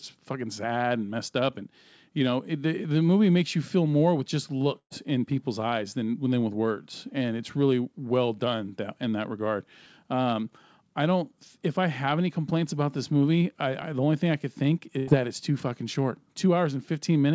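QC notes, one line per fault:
4.79–4.93 s and 14.98–15.10 s, burst of packet loss: after "feel more with just" and "thing I could think", the last sound is held and faded (the first fades to silence). The audio resumes at "in people's eyes than" and "that it's too fucking" with about 120 ms and 90 ms skipped. A plain dropout would skip nothing.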